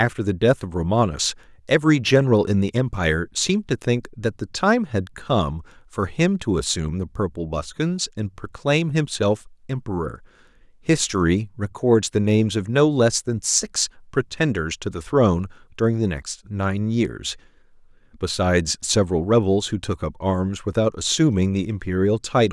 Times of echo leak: none

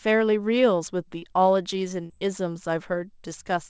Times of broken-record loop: none

